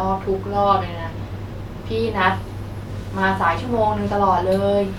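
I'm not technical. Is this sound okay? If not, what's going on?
Yes, it's fine: nothing in this recording sounds broken or out of place, so there's nothing here to worry about.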